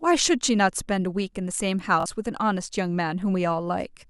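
Bluetooth stutter in this speech clip at 2.00 to 2.06 s: about 43 ms of audio was lost, so the receiver replayed its last buffer, then jumped ahead.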